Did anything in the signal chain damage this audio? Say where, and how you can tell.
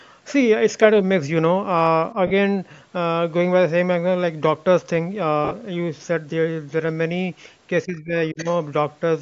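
Yes. The damage sits in the Bluetooth LE Audio link, where frames went missing in transit. At 2.27 to 2.31 s a 40 ms gap, which fits four 10 ms frames, was papered over by the LC3 decoder's concealment: it repeats the last spectrum with randomised signs, so the speech turns into a brief noisy smear. A second loss at 5.45 to 5.53 s spreads 60 ms of missing audio over about 80 ms, with the longest run around 40 ms, and produces the same smeared patches.

From 7.84 to 8.46 s the call processing ducks the speech, most likely speech suppressed in double talk. When the far end talks over the local talker, the echo canceller cannot tell the microphone signal from loudspeaker echo and attenuates everything it picks up. Here the speech dips by roughly 20 dB at the deepest point, and the attenuation adds up to about 400 ms of audibly pulled-down speech across that stretch.

Overlapping that, from 8.37 to 8.54 s, a faint second voice comes through, most likely the other side's voice leaking through. 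The far end is playing on the local loudspeaker, and the echo canceller's estimate did not fully subtract it from the microphone signal, so a residue survives. It sits roughly 20 dB under the main speech.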